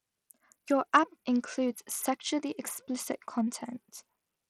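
Throughout the speech, treble flickers away under gritty, aliased noise, likely Bluetooth SBC compression consistent with about 80 kbps, grainier than MP3's watery swirl.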